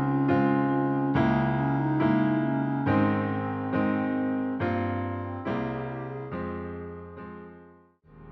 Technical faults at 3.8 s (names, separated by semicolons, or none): none